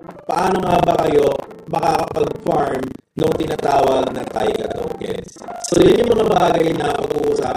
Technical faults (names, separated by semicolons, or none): buffer tearing